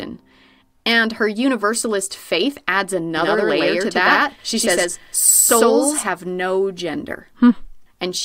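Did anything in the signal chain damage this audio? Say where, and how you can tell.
Yes. A doubled audio track runs from 3.17 to 6.07 s, right after "her universalist faith adds". A second copy of the speech trails about a tenth of a second behind, at roughly equal level. It is dry and clean, and it cuts in and out abruptly. Likely a second, slower capture path or a misaligned edit mixed in.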